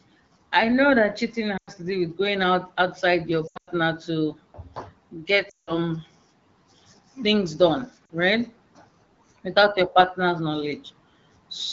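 Lost AMR speech frames hit the wideband speech at 1.57–1.70 s, 3.47–3.70 s (scattered, longest run 100 ms), 5.49–5.72 s and 8.06–8.10 s. The decoder stretches the last good frame with falling gain, so the sound smears, then fades. On a spectrogram, frozen harmonics dim into a gap; the waveform envelope sags.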